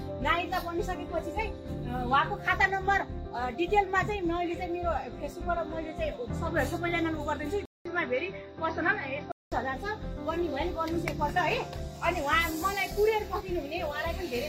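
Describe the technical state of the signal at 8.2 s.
Input switched to a poorer device, from 7.65 to 9.52 s: the sound drops out for 200 ms, then returns band-limited, with nothing above 6 kHz and a faint new noise floor well below the signal at a similar level, likely from a change of capture device.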